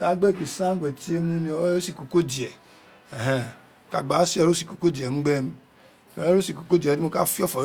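No technical faults can be heard anywhere in the recording. Nothing in it calls for a timestamp or a closer look.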